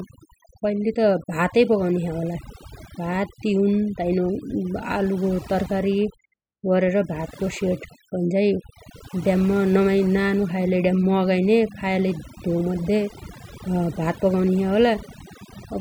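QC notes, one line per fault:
Throughout: overdone noise removal. The denoiser was pushed too hard, so bands near its noise estimate get gated out, leaving twinkly specks in the background.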